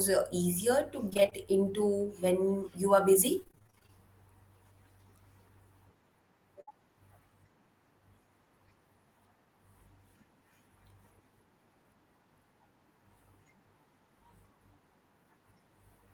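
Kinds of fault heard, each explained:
Repeated packet loss (robotic sound): Packets kept dropping out, and each hole got patched by stretching the last bit of speech, so it comes out choppy. It happens twice here. From 1.09 to 1.33 s there are seven small gaps, none longer than about 21 ms, with roughly 40% of that stretch concealed. From 3.40 to 3.92 s it's worse: thirteen gaps, up to about 26 ms each, with about half the span patched.
Jitter buffer slow-down: Right after the first choppy patch, between 1.46 and 1.72 s, the receiver was building its reserve back up by repeating tiny pitch cycles or bits of pause. That adds about 42 ms, so the speech plays at about 87% speed with the pitch unchanged. You hear it as a drawn-out, lazy stretch rather than a glitch, and the timing feels a touch dragged.
Burst of packet loss: At 6.61 to 6.74 s a run of about 60 ms of audio went missing together. 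The receiver carried the last sound forward and faded it, so there's a short held buzz or hiss before the speech picks up again a little further on. The in-between piece is simply gone, and the fill ran about 59 ms.
Short concealed packet loss: Inside that same burst, around 6.69 to 6.72 s, there's an extra small hole of about 20 ms that was covered by continuing the previous sound and then blending back in. On its own it would pass as a quick smear or wobble. Landing in the middle of the bigger dropout, it just adds to the roughness there, and any short consonant at that point may vanish.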